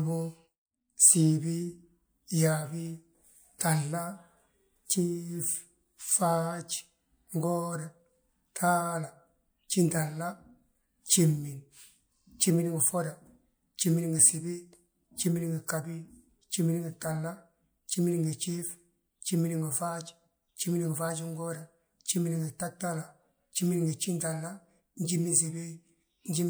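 Nothing in this speech recording stands out as a technical fault, so there's no problem here to pin down.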